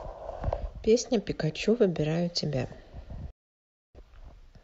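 At 3.30 s the receiver stopped decoding good frames, a digital broadcast dropout, and muted its output until clean data returned. The speech fades out over about 3 ms into silence, and resumes at 4.00 s with roughly 0.64 s of programme lost.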